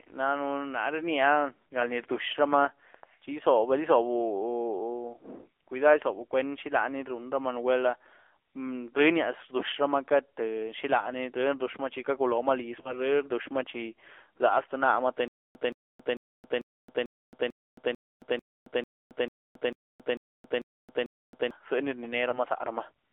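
Speech heard through a thin, buzzy, band-limited channel, confined to roughly 300 Hz to 3.5 kHz, with the synthetic edge of the AMR narrowband mobile codec at a low rate that fits its 7.4 kbps mode. At 12.82 to 13.11 s and again at 22.30 to 22.40 s the sound briefly warbles and dips: lost AMR speech frames, a single 20 ms frame each time, that the decoder concealed by extending the previous frame's pitch and spectrum at reduced gain. From 15.28 to 21.51 s, just after "tî nama tî", a stutter with silent gaps sets in: a 0.17 s fragment repeats 14 times, each followed by 0.27 s of dead silence, on a steady 0.44 s cycle, likely a stalled stream replaying its last buffered chunk at every retry.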